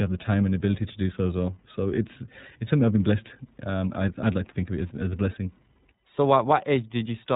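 Throughout, iLBC codec coding cuts everything above 3.8 kHz and makes the speech rough and synthetic, which fits 13.33 kbps 30 ms frames. A spectrogram shows an empty band above 3.8 kHz.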